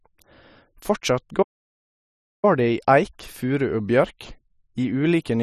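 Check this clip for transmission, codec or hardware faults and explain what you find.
One fault: a playback stall from 1.42 to 2.45 s. The player likely ran short of data or had its thread blocked, so the speech stops mid-flow for 1.0 s of silence before resuming.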